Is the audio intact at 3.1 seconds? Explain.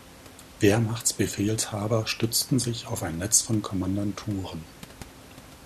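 Yes, the audio is intact at 3.1 seconds, with only the room's own background noise sitting about 21 dB below the speech.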